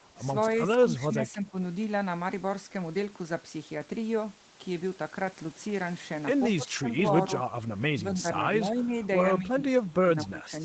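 From 0.87 to 1.55 s, and again from 6.56 to 6.89 s and from 10.24 to 10.52 s, the speech dips and breaks up in patches. The level falls by about 10 dB in the first stretch and about 15 dB in the later two, with only part of the first two windows hit. This is speech suppressed in double talk: with both ends talking at once, the echo canceller likely could not tell this talker from loudspeaker echo and pulled both down.

At 8.98 to 9.03 s a brief, faint scrap of the voice comes back about 245 ms late, roughly 30 dB below the speech. This is an echo leak. The far end was likely on a loudspeaker, and its echo canceller let a short piece of what its microphone picked up slip back into the call. The audio carries nothing above 8 kHz.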